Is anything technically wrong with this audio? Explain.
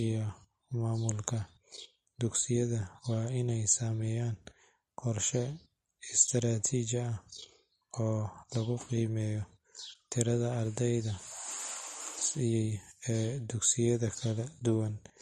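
Yes. Throughout the speech there is a hard treble limit at 13 kHz and a watery, swirling texture, with sibilants turning metallic and consonant onsets smeared. This is likely MP3 compression at a low bitrate, fitting about 42 kbps. The encoder discards the top band and switches weak frequency components on and off between frames.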